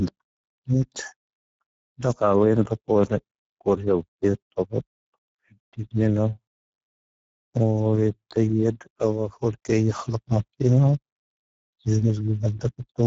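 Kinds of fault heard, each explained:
Speex codec: Throughout the speech, an older CELP voice codec has starved the excitation of bits, so the voice sounds noisy and hoarse, with plainly audible coding damage. The damage fits a bitrate of around 10 kbps. Nothing is left above 7.7 kHz. A plain low-pass filter dulls the top but keeps the voice clean, and a transform codec smears into swirly or watery artefacts. This sounds instead like a grainy, rasping texture inside the voice itself.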